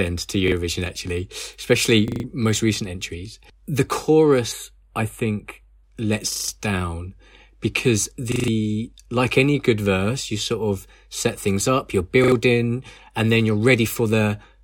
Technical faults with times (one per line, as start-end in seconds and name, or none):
0.48-0.52 repeated buffer
2.08-2.24 repeated buffer
4.52-5.83 channel delay (comb filtering)
6.32-6.48 repeated buffer
8.32-8.48 repeated buffer
12.24-12.32 repeated buffer